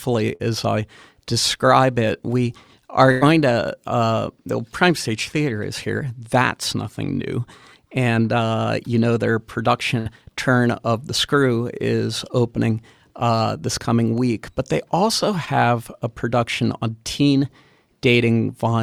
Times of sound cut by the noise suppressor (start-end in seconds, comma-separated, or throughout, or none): none